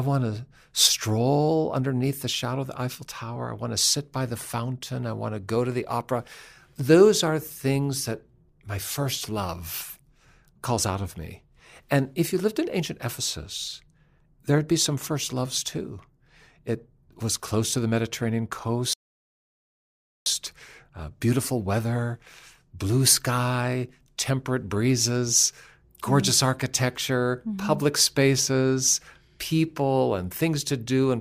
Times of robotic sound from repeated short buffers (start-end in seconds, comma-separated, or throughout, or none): none